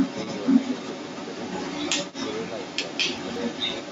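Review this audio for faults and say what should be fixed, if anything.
The other side's voice is leaking through for the whole clip, from 0.0 to 3.9 s, a second voice sitting roughly 10 dB against the main talker. That's likely a loudspeaker feeding back into the mic with the echo canceller not fully removing it. Headphones on the talker's end, or retuning the echo canceller, would prevent it.

Around 3.18 to 3.36 s, chunks play out of order. A 60 ms block showed up two chunks late and got slotted after audio that should follow it, so you hear a brief jumbled stretch across the three hard joins. A jitter buffer that reorders by sequence number before playback would fix it.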